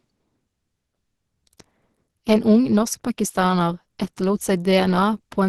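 From start to finish, the speech carries plainly audible codec damage, likely Opus compression at a low rate. The sound points to a rate near 16 kbps, with the encoder in its hybrid speech mode. Nothing is present above about 12.2 kHz, so the top octave is gone. The voice sounds muffled and hoarse. Its texture is grainy and rough. The cause is too few bits, and filled-in bands replace lost detail.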